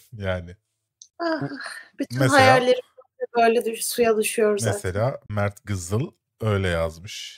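At 1.10 to 1.14 s and again at 5.26 to 5.30 s, the speech drops out. Each is a digital broadcast dropout. The receiver muted after bad data, with a 3 ms fade. Each gap fits one lost 32 ms frame. That sound is gone.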